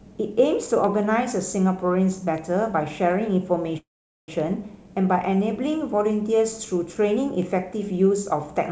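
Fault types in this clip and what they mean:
Bit error spike: Four isolated sharp ticks, at 0.84, 2.38, 4.40 and 7.42 s. Each is a single broadband click with no relation to the speech around it. Each comes from one flipped bit in a stored or transmitted sample value. That bit pushes the sample off by a power of two before it snaps straight back. At 0.84 and 7.42 s it is one sample, and at 2.38 and 4.40 s three in a row.
Call audio freeze: At 3.78 s the speech halts, a brief trailing buzz dies away, and about 0.45 s of silence follows. The sound resumes at 4.30 s exactly where it stopped, so nothing is lost and everything after is simply about 0.5 s later. The likely cause is packets stalling in transit until the jitter buffer ran dry. The receiver then stretched out the last audio and waited until delivery picked up again.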